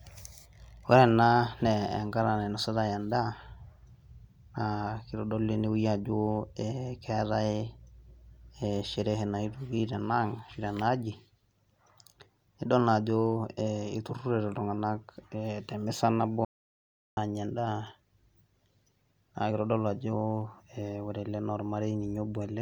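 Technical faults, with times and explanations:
16.45–17.17 s, audio dropout to silence: the speech cuts off into dead digital silence for about 0.72 s, with no room tone, likely a momentary input loss while recording continued.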